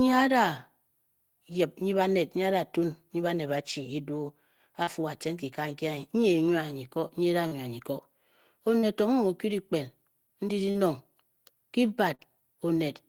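Speech with five short concealed packet losses, at 4.83 to 4.90, 7.47 to 7.54, 8.79 to 8.86, 10.71 to 10.78 and 12.15 to 12.22 s. Each time about 40 ms of audio failed to arrive, and the decoder bridged it by extending the preceding sound for roughly 35 to 43 ms before fading back. Unlike a plain dropout, there is no silent gap, only a brief smeared or wobbling patch where a short consonant may disappear.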